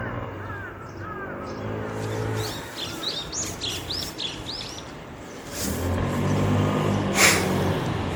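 From start to finish the audio has a swirly, smeared, hollow quality, with transients blurred and a watery churn in the texture, more damage than a single lossy encode would leave. Nothing sounds above about 19.9 kHz. This is likely generation loss: the sound seems to have passed through an MP3 encoder around seven times, which fits a 96 kbit/s chain, each pass requantising on a shifted frame grid so noise and spectral gaps pile up.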